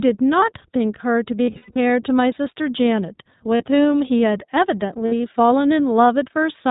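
Speech, passed through the iLBC codec throughout. Nothing above 4 kHz survives, and the voice sounds plainly rough and synthetic, consistent with 15.2 kbps iLBC using 20 ms frames. Lost iLBC frames cause three dropouts: 1.46 to 1.77 s, 3.56 to 3.63 s and 5.06 to 5.14 s. Each gap sounds like a held, buzzy vowel as the decoder repeats the last pitch cycle with noise. The first gap is about 240 ms of loss spread over roughly a third of a second, with the longest run around a tenth of a second. Clear speech returns almost immediately after each gap.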